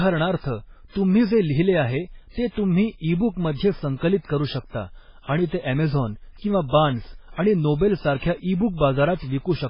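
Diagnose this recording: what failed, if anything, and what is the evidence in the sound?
Throughout the speech the sound is dull and watery, with a swirling quality, and nothing is present above 5.3 kHz. The stage is the codec, and the cause is likely MP3 compression at heavy damage, consistent with a very low bitrate around 16 kbps. Starved of bits, the encoder cuts the top band at a fixed frequency and drops weak spectral lines that flicker in and out between frames, producing the watery texture.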